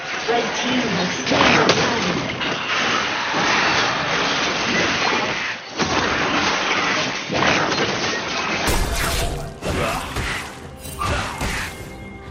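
From the start to 8.68 s the sound is dull, a bit quieter, with a faint new hiss and nothing above 6.4 kHz, likely an input switched to a poorer device.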